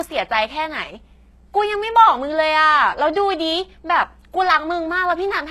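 A ground loop or nearby transformer leaks 60 Hz mains hum into the signal throughout, a steady low drone sitting roughly 30 dB below the speech. The treble is likely rebuilt by HE-AAC compression at a low bitrate, around 16 kbps. Throughout, nothing reaches above 12.3 kHz, and s sounds come out gritty and metallic where the copied upper bands fail to match the real harmonics.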